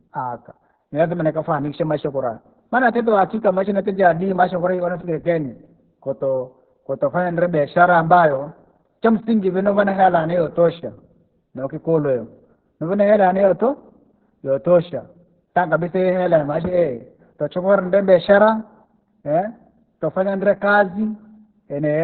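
From start to finish the speech carries heavy Opus voice compression in its SILK mode. The band is cut to narrowband, so nothing above about 4 kHz survives, and the excitation is coded so coarsely that voices turn muffled, hoarse and faintly robotic, which fits a bitrate near 6 kbps. A plain low-pass filter would only dull the sound. This buzzy, rough-edged vocal texture comes from the coder rebuilding speech from a sparse model.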